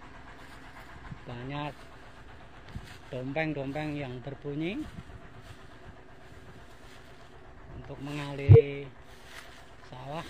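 Whole frames of the compressed stream never reach the output, either missing from the file or rejected by the decoder as damaged. These compressed frames are skipped three times: at 0.93 to 0.98 s, 3.49 to 3.55 s and 8.46 to 8.65 s. Each time the audio lurches forward, dropping roughly a tenth of a second at the first and last points and about half that at the second.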